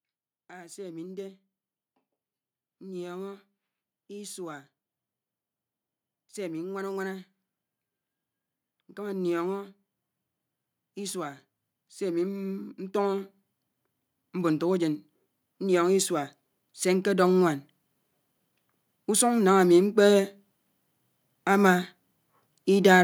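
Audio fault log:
10.95–17.61 s, automatic gain rising: the level climbs steadily by about 10 dB over roughly six and a half seconds, and the room noise swells right along with the speech. The automatic gain control judged the incoming signal too quiet and kept pushing its gain upward. Because that gain acts on the whole input, the background grows in step with the speaker rather than the speech alone getting louder.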